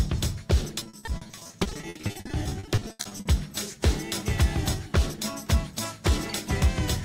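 Between 0.79 s and 3.27 s the audio breaks up with repeated packet loss (robotic sound). The stream keeps losing or receiving late chunks. Each hole gets papered over by stretching out the last bit of sound that arrived, and then the next hole hits almost straight away. What you hear points to around 42 separate dropouts, the longest about 80 ms. Concealment covers roughly 1.1 s, about 44% of that stretch, which is why it comes across as choppy and robotic with pieces missing.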